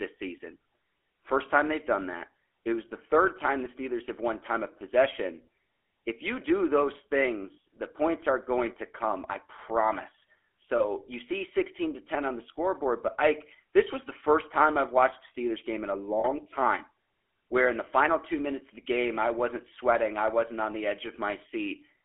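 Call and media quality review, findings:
GSM full-rate codec, whole clip. Buzzy, gravelly roughness on the speech, plainly audible. Band runs roughly 300 Hz to 3.4 kHz, nothing up top. Codec models the vocal tract and drives it with a sparse, regularly spaced pulse excitation, so fine detail gets thrown away. Fits a 13 kbps full-rate leg somewhere in the path.

Lost GSM frames, three spots. 7.54–7.58 s, after "you do those", before "the points are going". 10.78–11.08 s, after "to come I promise", before "you see". 16.2–16.26 s, after "game in a". Brief rough, metallic ring where the decoder repeats the last good frame. The 7.54 and 16.2 s gaps fit about two 20 ms frames each.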